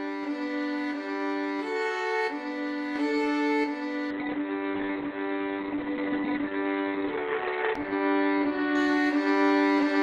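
At 4.11 s a call bitrate drop sets in and lasts until 9.56 s. The encoder was forced onto far fewer bits, which fits a fall from about 48 kbps to around 10 kbps. It codes the sound more coarsely. The audio band also shrinks, from 20 kHz down to 4 kHz. The sound turns muffled, rough and watery. It stays at its worst for 3.39 s before the bitrate recovers.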